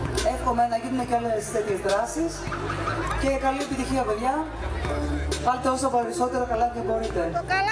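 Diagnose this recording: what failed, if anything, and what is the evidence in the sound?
Nothing in the recording points to a failure at any stage of the chain. No dropout, distortion, timing disturbance or other defect can be heard anywhere in the audio.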